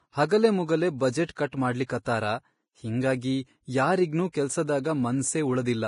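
Heavy lossy coding, likely Vorbis compression at a low bitrate around 30 kbps, runs through the whole speech clip. The encoder has thrown away everything above 10.6 kHz and quantised the remaining treble so coarsely that its fine structure has turned into noise of similar energy. The result is a dull top end with a hissy, grainy layer over the voice. Tones sound roughened, and consonant onsets lose their crispness.

The same block-based coding also causes pre-echo at four sharp attacks. At each one, the quantisation noise meant for the loud onset has spread back into the quiet moment before it. A brief hiss runs ahead of the attack at 1.26 to 1.29 s (34 ms), at 1.51 s, at 1.86 to 1.90 s (33 ms) and at 4.32 s. Each of these onsets sounds soft and smeared rather than clean.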